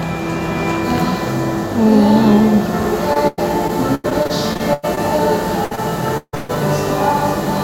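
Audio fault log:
3.13–5.01 s, repeated packet loss (robotic sound): across this stretch the audio breaks up in twelve separate holes, the longest about 100 ms, with roughly 0.46 s missing in total. The receiver covers each hole by extending the preceding sound. These patches make up about 23% of the span, and a new gap arrives before the sound settles, so the passage comes across as choppy and mechanical, with pieces absent.
5.65–5.73 s, burst of packet loss: about 60 ms of audio fails to arrive in time. The gap is bridged by carrying the last sound forward while turning it down, which is heard as a short held buzz or a fading hiss. The audio then picks up a little further on, and the material in between is gone.
5.75 s, short concealed packet loss: a gap of about 20 ms, filled by briefly continuing the preceding sound and then blending back into the real signal. It sounds like a quick smear or wobble, and any very short transient in that spot can drop out.
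6.17–6.35 s, long network dropout: about 160 ms of audio is lost. For most of that time a fading continuation of the previous sound is heard, and the last 40 ms or so go silent. The likely cause is no audio arriving at all for this stretch, with the receiver concealing it until its fill ran out.
6.35–6.51 s, burst of packet loss: directly after the dropout, a further 140 ms is lost and fully covered by extended, decaying sound with no silence. The signal then resumes later than where it broke off, so this section of the audio is skipped.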